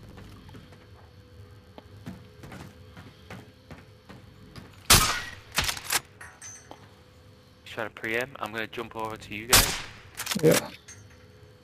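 A steady buzz at 91.5 Hz runs through the whole clip, and the audio plays very slightly slow, at 0.996 times normal speed, with timbre unchanged. This is a block size mismatch (padded): each block arrives slightly short and is topped up with zeros.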